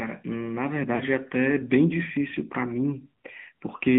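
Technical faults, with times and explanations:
Throughout: AMR narrowband mobile codec. The sound is buzzy and synthetic, which fits AMR-NB at around 10.2 kbps. A spectrogram shows energy confined to about 150 Hz to 3.6 kHz with a hard empty ceiling above, and harmonics look smeared and coarsely modelled.
0.96–1.02 s: lost AMR speech frames. A 40 ms gap, which fits two dropped 20 ms frames, was filled by repeating the previous pitch and vocal-tract settings at falling gain. It sounds like a brief drawn-out warble and dip. The waveform's envelope sags there, and the spectrogram shows frozen harmonic stripes fading.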